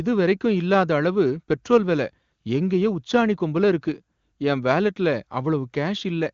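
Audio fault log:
No faults heard in this speech clip.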